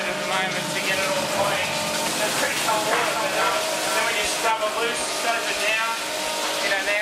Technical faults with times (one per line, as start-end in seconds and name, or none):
2.65-4.51 doubled audio track